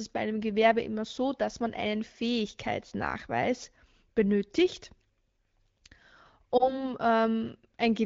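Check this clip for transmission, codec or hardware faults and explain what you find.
One transmission fault stands out, in AMR-WB speech whose light coding softness fits a rate of about 12.65 kbit/s. Between 6.57 and 6.84 s the speech briefly dips and warbles, then recovers a little roughly. This is a lost AMR speech frame: a single 20 ms frame failed its radio checksum, so the decoder filled the gap by reusing the previous frame's pitch and vocal-tract settings at reduced gain. The smeared patch and the ragged resumption follow from that.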